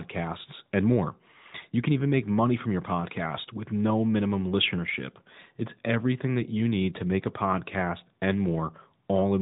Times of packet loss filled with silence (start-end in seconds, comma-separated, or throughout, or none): none